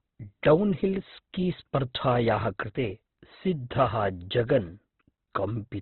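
Throughout, likely Opus compression at a very low rate has cut everything above 4.2 kHz, leaving the speech muffled, narrow and heavily grainy.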